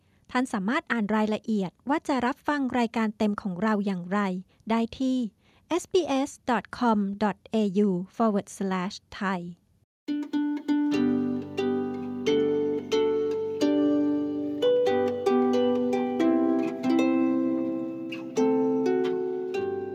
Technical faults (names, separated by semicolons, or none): none